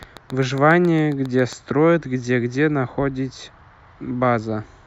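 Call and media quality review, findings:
Likely interference pickup or a struggling interface injecting periodic pulses. Train of clicks, 0.03 to 1.54 s: roughly ten same-shaped ticks at a regular 7.35 per second, peaking about 5 dB above the speech. Audible over speech and through pauses.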